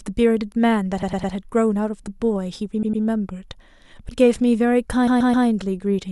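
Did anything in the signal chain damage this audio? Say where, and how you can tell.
Yes. Repeated frames at the codec or storage stage: short runs of compressed frames were decoded more than once. The speech stutters at 1.02–1.34 s (a 104.5 ms block replayed three extra times), 2.82–3.03 s (104.5 ms, twice more) and 5.07–5.46 s (130.6 ms, three more), lengthening the audio.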